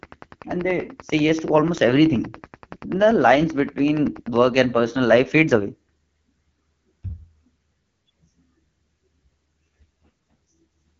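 From the start, the speech carries the rough, raspy grain of AMR wideband (HD Voice) coding at 8.85 kbit/s, with nothing above 7.3 kHz, wider than narrowband's muffled telephone sound. From 0.03 to 4.47 s, just before "and personal life fades", a train of clicks ticks at a steady 10.4 per second, roughly fifty alike pulses peaking about 5 dB above the speech, likely interference from nearby equipment. Their regular spacing and much the same shape set them apart from random crackle.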